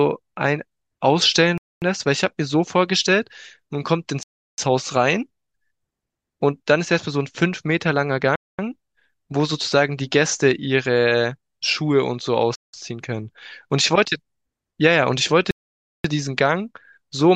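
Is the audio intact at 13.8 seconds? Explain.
Yes, at 13.8 seconds the speech plays through intact, with no audible fault at that moment.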